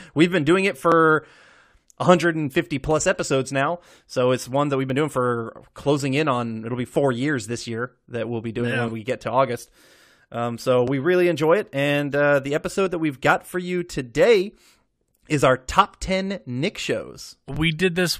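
Overlap between stream segments: timestamps on adjacent 2-second speech segments overlap, so the player discards a sliver of audio that was never duplicated. Each splice leaves a tiny click or skip at 0.92, 2.91 (before "episodes now"), 4.90, 8.88 ("we'll be doing yeah" / "we get to") and 10.88 s (before "really enjoy it").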